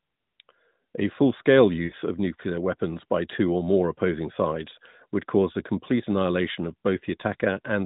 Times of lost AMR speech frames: 1.84-1.94

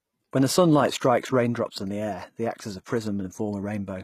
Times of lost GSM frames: none

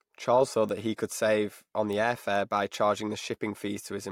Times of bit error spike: 0.69, 1.93, 2.74

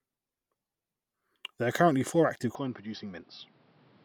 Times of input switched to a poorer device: 2.55-4.05

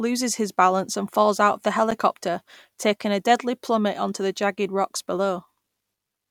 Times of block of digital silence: 1.91

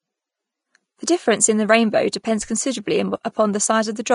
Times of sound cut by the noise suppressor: none

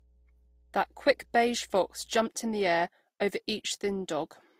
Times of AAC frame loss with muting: none

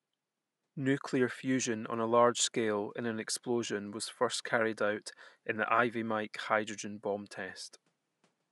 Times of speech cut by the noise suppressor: none

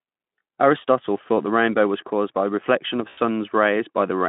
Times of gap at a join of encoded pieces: none

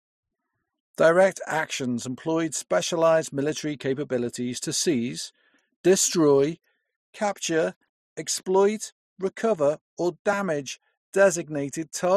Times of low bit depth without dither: 7.21-9.15

